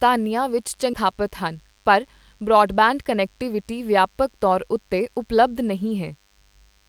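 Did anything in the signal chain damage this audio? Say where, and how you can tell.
Yes. Three faults are audible.

The first is DECT cordless phone buzz, which entered in the analogue wiring or audio circuit. For the whole clip there is a thin, steady buzz, about 40 dB below the speech. A nearby DECT handset or base transmits a radio burst every 10 ms, and the circuitry rectifies that into audio at 100 Hz. Because the bursts are sharp, the buzz carries many harmonics. On a spectrogram it shows as an even comb of horizontal lines at multiples of 100 Hz that runs unbroken through speech and pauses.

The second is a skip ahead at the network or jitter buffer stage, at 0.93 to 0.95 s. Roughly 0.7 s of speech is missing, and nothing fills the gap: the audio on either side is spliced almost directly, so playback lurches forward. Packets were dropped, or an overflowing buffer discarded them, while later audio was already queued. 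On the waveform there is an abrupt discontinuity. On the spectrogram the formants and pitch jump at once, with no transition between them.

The third is a jitter buffer speed-up from 1.05 to 3.73 s, ending just before "ਵਿਆਪਕ ਤੌਰ ਉੱਤੇ". The receiver was holding more delay than its target, so it repeatedly cut out short pieces of one or a few pitch periods, about 150 ms in total. The speech runs about 6% fast and sounds hurried, but its pitch stays the same. On a spectrogram the harmonic spacing is unchanged while syllables are compressed in time. The waveform shows small joins at pitch-period boundaries.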